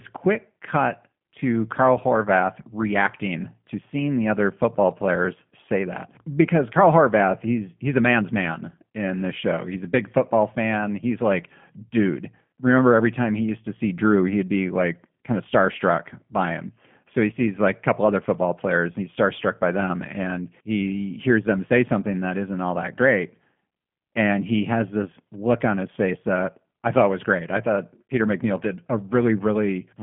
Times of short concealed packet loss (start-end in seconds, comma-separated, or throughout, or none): none